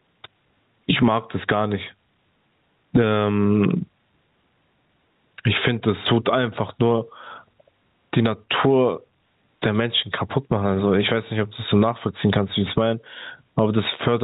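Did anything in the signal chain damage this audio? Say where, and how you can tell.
Yes, at the input gain and limiting stage. Throughout, loud and soft parts are squashed closer in level, with the gain swinging roughly 25 dB. That's gain pumping, likely from gain set far too high with a fast limiter clamping down.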